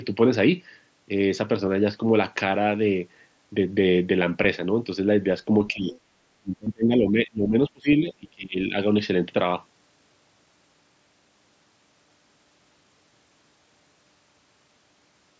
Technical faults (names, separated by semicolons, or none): concealed Bluetooth headset packet loss; speech suppressed in double talk